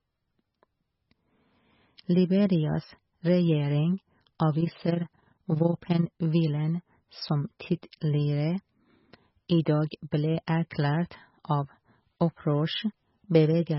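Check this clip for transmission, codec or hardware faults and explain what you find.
The speech carries codec damage throughout, plus a spell of level ripple and three pre-echoes.

Throughout, heavy MP3 compression is the likely cause: nothing remains above 5.6 kHz and sound turns watery, pointing to a very low bitrate around 16 kbps.

From 4.61 to 6.13 s, overlap-add ripple: frames rejoined without constant-gain overlap make level swing about 11 dB roughly 20 times a second, a rough flutter.

Pre-echo occurs at 7.82, 10.11 and 10.47 s. Block quantisation noise spreads 11 to 12 ms ahead of sharp attacks, giving brief hiss before each and softening it.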